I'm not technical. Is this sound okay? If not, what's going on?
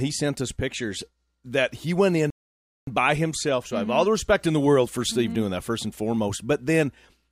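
No. At 2.30 s, right after "pictures that he went", the speech drops to silence for 0.57 s, then picks up at "by himself" with nothing missing. That's a rebuffering stall: the player ran out of downloaded audio and waited for more.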